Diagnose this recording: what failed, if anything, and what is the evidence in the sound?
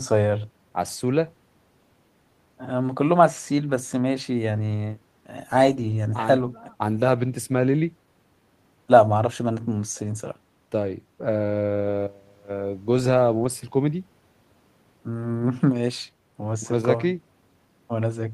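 No audible fault detected.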